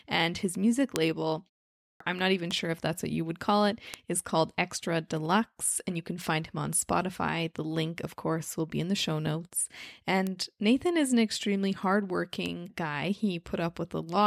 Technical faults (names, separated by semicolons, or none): bit error spike; clipped start after a pause